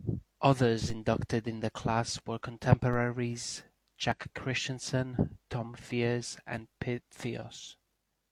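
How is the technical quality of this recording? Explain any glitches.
The speech recording has three glitches: two low-frequency DC steps and one skipped section of compressed audio.

At 0.90 s, just before "inducted in the class", and at 2.93 s, just after "in the class were", the waveform's zero line jumps and then drains away through a roughly 5 Hz high-pass, giving a dull thump. Unlike a dropout, the speech carries on intact.

At 4.12 s, compressed frames are skipped and the audio leaps ahead by about 40 ms.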